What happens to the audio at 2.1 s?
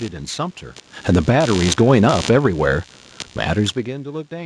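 At 2.1 s the automatic gain is falling. From 0.94 to 2.35 s the control judged the input too loud or its background too strong and lowered it by about 7 dB. Speech and background sink together.

Computer activity noise runs underneath. Computer load shifts the shared ground, adding a buzzy pulsing of around 70 pulses per second, well below the speech.

Periodic clock jitter also colours it. A clock wobble of around 2 kHz puts sidebands on every component, giving the speech a rough, metallic edge.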